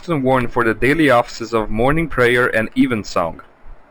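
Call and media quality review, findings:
Imaging from linear upsampling, present the whole clip. Speech sounds dulled up top, with a faint metallic shimmer riding the sibilants. Mirrored spectrum images sit around 6 to 12 kHz, roughly 30 dB down. This points to a 12 kHz source pushed to 48 kHz by straight-line interpolation in the resampler, which barely filters those copies out.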